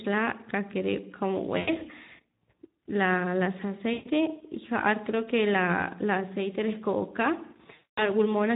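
Throughout, the Speex codec has too few bits for the excitation, which fits a bitrate around 11 kbps, so the speech sounds plainly hoarse and noisy. At 1.57–1.81 s, 3.93–4.09 s and 7.75–8.10 s, there is VoIP packet loss concealed by the speech codec. The decoder fills gaps of about 100, 120 and 220 ms by extending the last pitch and filter, which stretches the sound into a buzzy tone or coloured noise that fades before the speech recovers.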